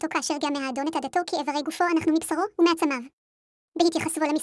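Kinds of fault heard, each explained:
Wrong sample rate: The whole clip runs fast and high at once, exactly what happens when samples get played back at a higher rate than they were captured at, with no conversion in between. Everything here moves 1.5 times too quickly and sits about seven semitones sharp, so the voice comes across chipmunky and rushed. That 1.5 ratio fits speech recorded at 16 kHz being played out as if it were 24 kHz.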